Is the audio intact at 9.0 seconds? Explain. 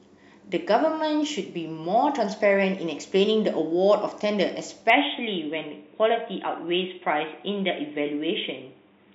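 No. From 4.90 s to the end, the speech goes dull and boxy, with nothing above 3.8 kHz and faint new noise about 45 dB down. The input likely switched to a poorer device.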